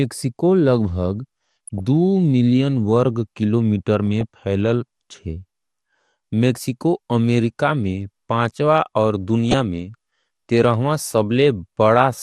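Throughout the speech, MP2 compression has too few bits for its 32 sub-bands, likely at around 80 kbps, so upper bands drop out, leaving a dull, gurgling, grainy sound. At 1.67 to 1.80 s, 4.21 to 4.23 s and 9.51 to 9.54 s, DAB burbling appears: bit errors slip past error correction and corrupt samples, putting short blips of noise into single sub-bands.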